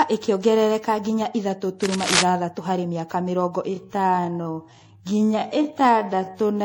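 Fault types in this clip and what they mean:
generation loss: The whole clip sounds swirly, smeared and hollow, with blurred attacks, more than one MP3 pass at 64 kbit/s would cause. It was likely re-encoded around seven times.
cable scratch noise: Dense, uneven rustling at about -5 dB relative to the speech from 1.83 to 2.23 s, after "ĩkĩongerereka nginya ithatũ". Likely a moving contact, not isolated clicks.
time-stretched section: After "harĩ mĩaka mĩrongo", from 3.65 s to the end, the pace drops abruptly to 0.583 times speed and drags. Unlike tape slowdown, the pitch stays put.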